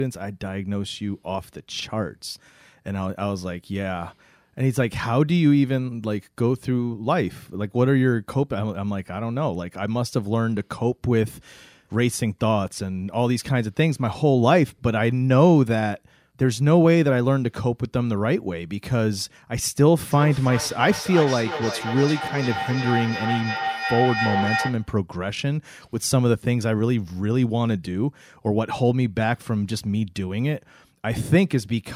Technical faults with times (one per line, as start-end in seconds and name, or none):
20.09-24.97 feedback howl